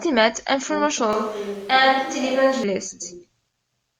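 Switch to a distant microphone, 1.13 to 2.64 s: the speech turns suddenly roomy, hollow and bass-light, likely because the close microphone dropped out, before snapping back.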